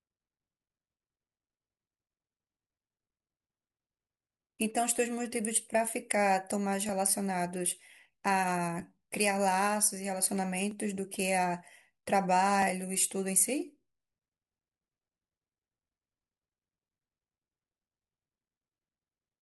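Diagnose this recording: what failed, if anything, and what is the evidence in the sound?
Clock drift buffer slips at the driver or buffer stage: regular clicks every 1.91 s from 1.16 to 18.36 s in the speech, likely two unsynced clocks about 500 ppm apart.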